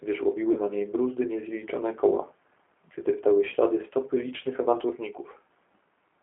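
Speech carried over a G.729 codec link, most likely G.729A at 8 kbit/s, with the line band running from about 250 Hz to 3.4 kHz. Nothing reaches above that ceiling, so sibilants lose their edge. The codec damage is plainly audible: the voice is rebuilt from a vocal tract filter, a pitch predictor and a handful of pulses per 10 ms frame, which gives it a rough, slightly synthetic texture. There are two brief disturbances from VoIP packet loss concealed by the speech codec. The first runs from 0.53 to 0.59 s, just before "na niej bruzdy niezliczone". The second runs from 3.50 to 3.55 s, just before "stopy licznych". Each starts with about 20 ms of missing audio, which fits a single lost packet. The decoder fills the gap by extending its last pitch and filter state at falling gain, so the sound stretches into a fading buzzy tone or coloured noise. Because every frame is predicted from the one before it, the voice stays weak or distorted for tens of milliseconds or more after the stream resumes.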